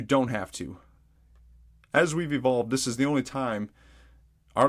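No technical faults are audible.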